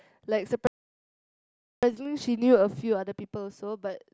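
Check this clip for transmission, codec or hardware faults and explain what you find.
One fault is audible: a playback stall from 0.67 s to 1.83 s. The speech stops mid-flow and stays silent for about 1.16 s. The likely cause is that the player ran out of data or its thread blocked. The speech then resumes.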